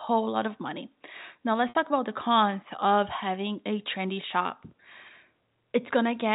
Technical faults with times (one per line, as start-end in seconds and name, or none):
1.69-1.75 packet loss with pitch repetition